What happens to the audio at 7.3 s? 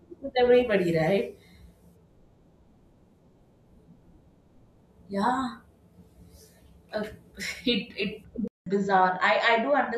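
Nothing goes wrong at 7.3 s; the audio carries on intact through that moment with no dropout, click or distortion.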